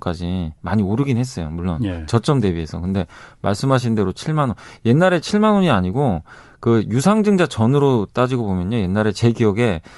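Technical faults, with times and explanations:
Throughout, Bluetooth LC3 compression: the speech has a plainly audible grainy, breathy edge, likely from the LC3 transform codec used in Bluetooth LE Audio, with a character that fits roughly 48 kbps in 10 ms frames. The encoder discards much of the upper spectrum in each frame and substitutes shaped noise, which gives the voice its grainy, breathy edge.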